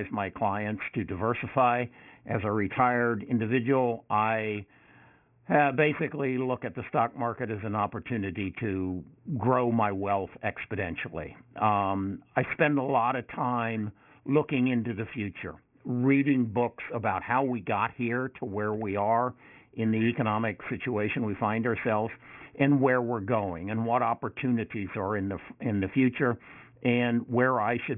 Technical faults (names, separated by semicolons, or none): aliasing